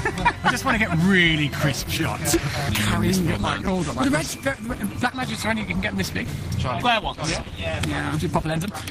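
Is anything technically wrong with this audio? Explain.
Yes, two things. From 1.72 s to the end, the adaptive stream drops to a lower bitrate: codec artefacts rise, and the quality changes suddenly with no gap. That fits a connection slowdown forcing a switch from roughly 64 to 16 kbit/s Opus. There are also CD skips at 3.67 s and 6.80 s, each a brief tick and a near-instant mute, a few milliseconds at most, as the laser jumps to another turn of the spiral and resumes elsewhere.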